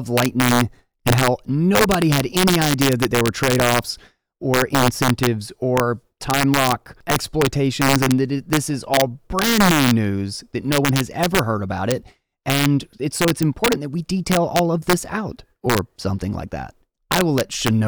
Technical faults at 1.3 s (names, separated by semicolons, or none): integer overflow